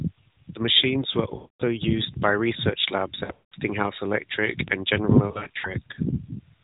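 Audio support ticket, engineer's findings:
Lost AMR speech frames, 1.36–1.62 s: sound smears and sags to silence within about 0.1–0.2 s of a 240 ms gap, then comes back thin. Decoder on a failed-checksum run repeating last good pitch/tract params with falling gain; length points to roughly a dozen 20 ms frames.

Lost AMR speech frames, 3.24–3.54 s: patchy warble across 280 ms, with one 180 ms stretch drawn out and fading. Same concealment, scattered radio errors.

Lost AMR speech frames, 5.28–5.74 s: string of short dips and warbles across 360 ms, none longer than 40 ms, so it never fully mutes. Scattered drops of one or two frames, each concealed briefly.

Bit error spike, 4.68 s: single sharp broadband tick, nothing to do with the speech around it. Probably a flipped bit in memory or on a digital link; the sample value jumps by a power of two for what looks like three samples, then snaps back. 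The 4 kHz band limit points to AMR-NB, and the slight codec texture to its 12.2 kbps mode.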